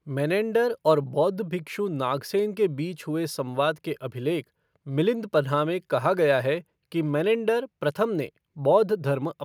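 No technical fault can be heard anywhere in this speech recording; the signal stays continuous and intact throughout.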